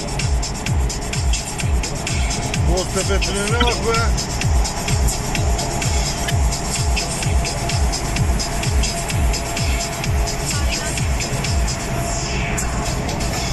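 At 3.60 to 3.70 s and again at 6.23 to 6.30 s, a corrupt frame decoded fault cuts in: damaged bits in a few compressed frames were played as if valid, so misread gains and codes push energy into the wrong frequencies. Each lasts about 0.1 s or less, heard as a sharp chirp or noisy blip peaking near -5 dBFS. A spectrogram shows short, blocky vertical smears unrelated to the surrounding sound; the waveform shows an abrupt, frame-length burst.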